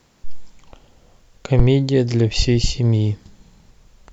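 Speech with a phantom power thump from 1.59 to 1.68 s: a deep bump from a supply voltage step on the live input, passed through the coupling capacitors and dying within about 20 ms. Unlike a plosive, it is a purely electrical step with no breath noise.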